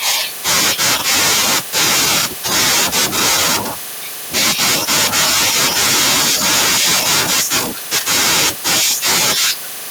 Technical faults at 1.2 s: microphone overload

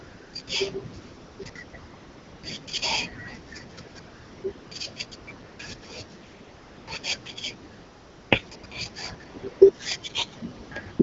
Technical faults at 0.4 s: AMR comfort noise

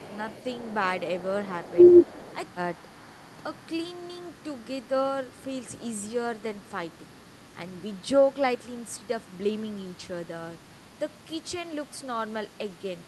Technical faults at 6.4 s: none

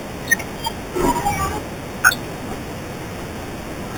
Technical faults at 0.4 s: imaging from sample-and-hold upsampling

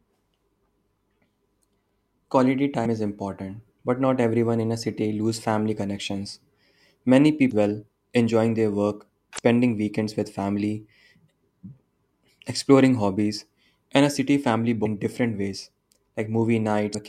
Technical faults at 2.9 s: damaged data in a compressed stream

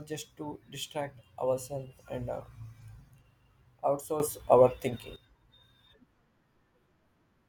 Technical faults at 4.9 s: sudden gain jump

